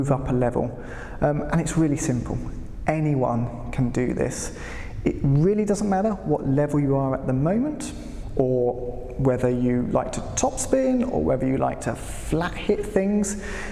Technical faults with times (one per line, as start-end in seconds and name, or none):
none